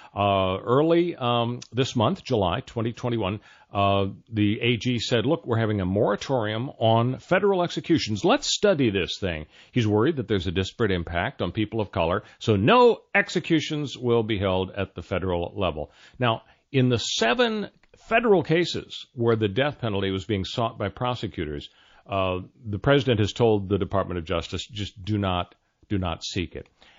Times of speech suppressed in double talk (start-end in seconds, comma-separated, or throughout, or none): none